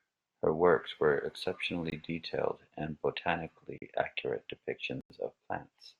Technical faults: block of digital silence

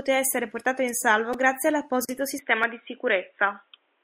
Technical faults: repeated buffer; gap at a join of encoded pieces; input switched to a poorer device

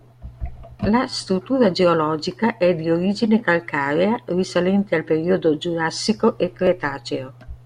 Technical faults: repeated buffer

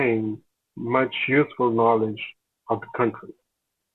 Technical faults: none

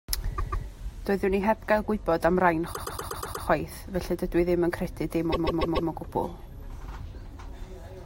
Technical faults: repeated frames

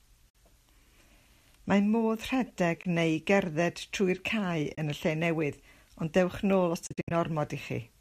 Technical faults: AAC frame loss with muting

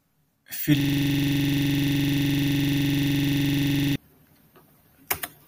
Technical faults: system hang loop

